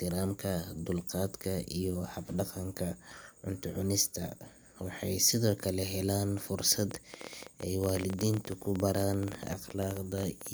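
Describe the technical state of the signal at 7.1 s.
At 7.1 s you're inside a train of clicks running from 6.91 to 10.48 s: about fifty similar pops at roughly 14 per second, unevenly spaced and peaking around 10 dB above the speech. Likely interference from nearby gear or a faulty connection or power supply.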